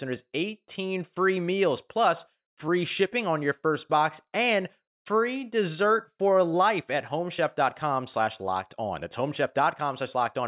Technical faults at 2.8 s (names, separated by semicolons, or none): none